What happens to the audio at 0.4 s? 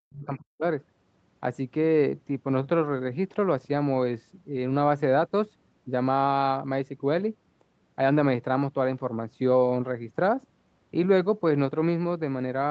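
At 0.4 s the speech is inside a stretch of speech suppressed in double talk, running from about 0.05 to 0.65 s. The level dips, roughly 40 dB at its deepest, with around 0.4 s of that span affected. The likely cause is an echo canceller that, with both sides talking, could not separate the near talker from loudspeaker echo and attenuated both. Unlike packet loss, the gaps are gain dips with no concealment warble or repeated fragments.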